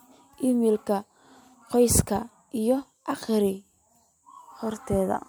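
No technical faults can be heard anywhere in the speech recording. Nothing in the signal calls for a time stamp or a closer look.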